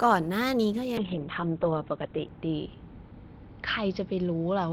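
Call bitrate drop from 0.98 s onward: the bit-starved encoder narrows bandwidth from 20 kHz to 4 kHz, leaving speech muffled and coarse to the end.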